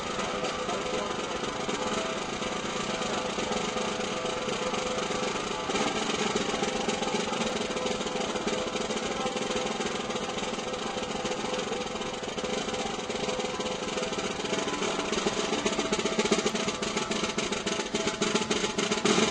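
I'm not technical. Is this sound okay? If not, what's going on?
Yes, this sound is okay, and nothing is going wrong in it.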